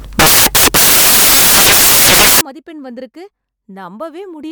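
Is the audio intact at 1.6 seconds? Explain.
No. At 1.6 seconds the speech is buried under loud, harsh broadband noise, part of a fault running from the start of the clip to about 2.41 seconds. This is samples built from the wrong bytes. The bytes of each sample are assembled in the wrong order or alignment. The rapidly changing low bits end up as the most significant part of each value. The result is loud, harsh broadband noise.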